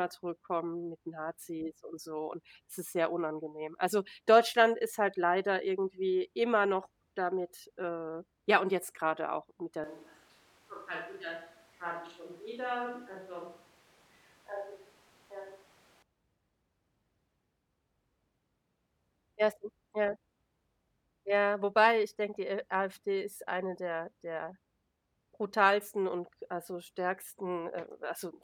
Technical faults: switch to a distant microphone

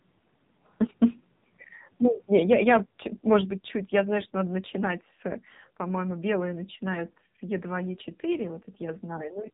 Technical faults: AMR narrowband mobile codec; microphone volume stepped down

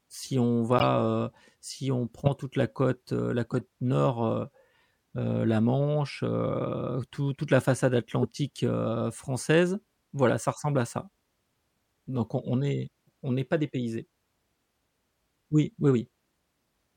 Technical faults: corrupt frame decoded

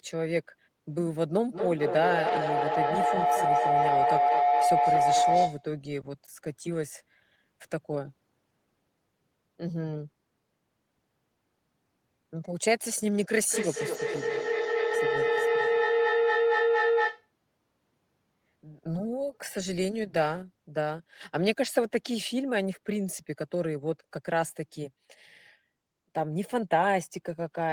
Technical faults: feedback howl

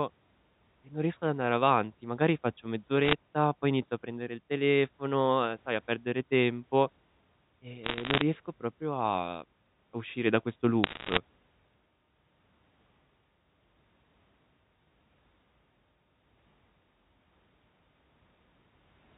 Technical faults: bit errors on a digital phone line

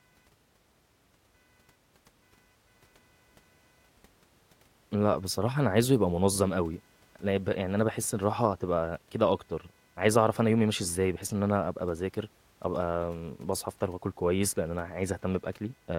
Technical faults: computer activity noise

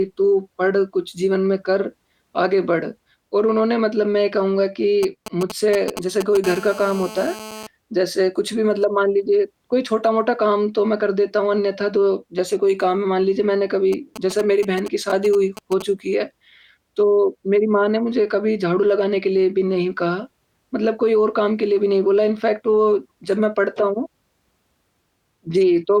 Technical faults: GSM signalling bursts; GSM phone buzz

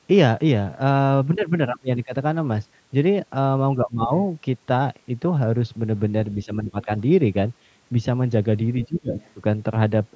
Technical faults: speech suppressed in double talk; other side's voice leaking through

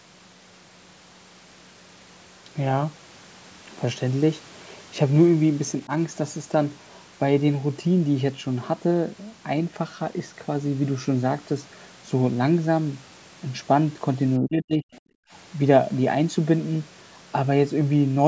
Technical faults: speech suppressed in double talk; other side's voice leaking through; background gated by the echo canceller

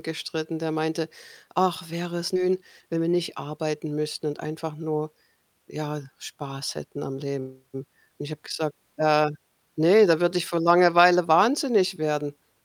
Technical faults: skip ahead; jitter buffer speed-up

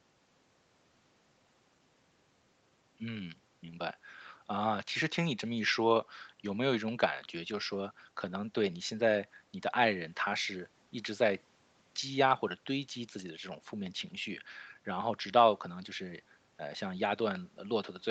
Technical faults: none

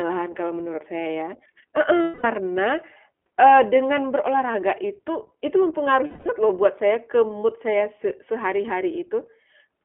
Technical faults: iLBC codec; lost iLBC frames

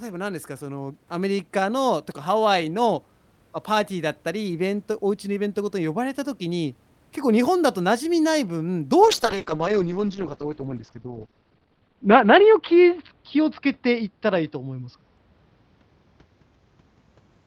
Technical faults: call bitrate drop

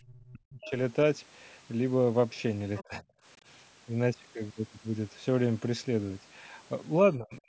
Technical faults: speech suppressed in double talk; other side's voice leaking through

